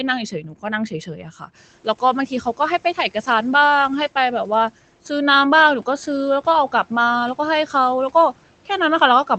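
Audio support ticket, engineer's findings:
Speech cut by the noise suppressor, 0.42–0.65 s: low-level speech pulled down about 9 dB, roughly 0.1 s affected in total. Again at 0.91–1.49 s: about 10 dB, roughly 0.2 s affected. Suppressor misread quiet speech as noise and gated it. Spectrogram: faint consonant and word-ending energy missing. Waveform: tails squashed toward the floor. Room noise steps up about 19 dB near 1.5 s, still about 25 dB under speech. Band stops near 8 kHz, consistent with a roughly 20 kbps Opus call.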